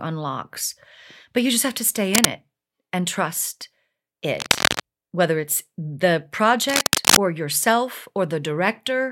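At 2.14 to 2.29 s, 4.38 to 4.8 s and 6.69 to 7.18 s, bursts of cable scratch noise rasp over the speech, roughly as loud as the signal or a little louder. A worn cable or connector being moved is the likely cause, its contact resistance jumping erratically.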